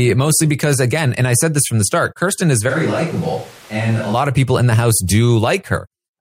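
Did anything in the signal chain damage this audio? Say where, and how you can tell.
Yes. From 2.71 to 4.13 s, starting right before "of people in the", the speech abruptly turns roomy and hollow, and then just as abruptly returns to close sound. This points to a switch to a distant microphone at the capture stage, likely after the close mic's feed dropped out or was left out of the mix. On the waveform the level falls by about 5 dB. On the spectrogram the bass thins, reverberant tails smear across the gaps, and the noise floor rises to about 25 dB below the speech.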